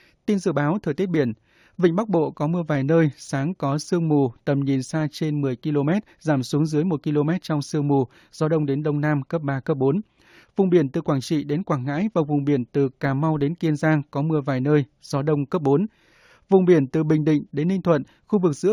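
Throughout the speech there is imaging from linear upsampling. The rate was raised by joining neighbouring samples with straight lines, a crude interpolation that filters poorly. The top of the band, below 8 kHz, is softened, and a faint mirror copy of the spectrum sits between 8 kHz and 16 kHz, roughly 35 dB under the speech. That band points to a conversion from 16 kHz up to 44.1 kHz. It adds a light metallic shimmer to sibilants.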